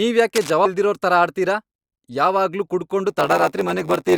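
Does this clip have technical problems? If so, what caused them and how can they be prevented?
Yes. From 0.35 to 0.51 s a rough, uneven scratching sits about 10 dB below the speech, denser and more irregular than a single click. This is likely cable scratch noise from a worn connector or cable being moved. Replacing or cleaning worn cables and connectors and keeping them still while recording prevents this.

At 0.65 to 0.69 s the speech jumps ahead by around 300 ms. That jump fits about fifteen 20 ms frames, so these are compressed frames skipped. Checking file integrity and retransmitting damaged frames prevents this.

From 3.09 s to the end, a steady 93.8 Hz buzz appears and the speech runs at 0.938 speed, slower but near normal pitch. This is a block size mismatch (padded), consistent with a 512-sample read block being filled partly by shorter writes. Matching the block sizes between the writing and reading stages prevents this.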